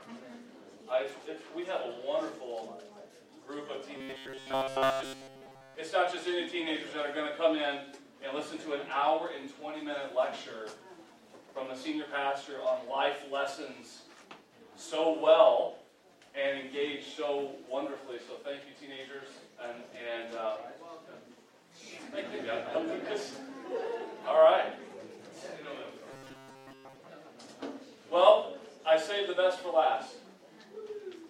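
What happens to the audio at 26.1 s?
At 26.11 s the sound turns into robotic sound from repeated short buffers, lasting until 26.99 s. It becomes a rigid, metallic buzz pitched at 134 Hz. That pitch points to a repeated chunk about 7.5 ms long. The likely cause is audio arriving too seldom, so the playback repeats the last short buffer to fill the gap. Most of the span is repeated material rather than the real audio, which is skipped.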